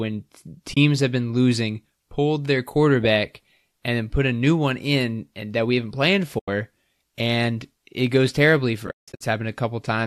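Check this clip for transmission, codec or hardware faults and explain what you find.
The speech has three muted gaps from AAC frame loss with muting, over a light low-delay coding texture that is likely AAC-ELD at 64 kbps. The first gap falls at 0.74–0.77 s, 30 ms, just before "have been losing pulled". The second is at 6.39–6.48 s, 90 ms, after "that we haven't planned". The third comes after "and it goes terribly", at 8.87–9.21 s, where holes totalling 270 ms are broken up across 340 ms, the longest about 150 ms. Lost frames were decoded as silence and the overlapping windows fade each edge, so the holes are soft-edged. Lengths in 10 ms steps fit short low-delay frames. Unlike concealment that repeats or smears the previous sound, these gaps are simply empty.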